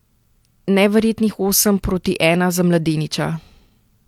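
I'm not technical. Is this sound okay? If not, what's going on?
Yes, nothing in this recording points to a technical problem with how the sound was captured or passed along.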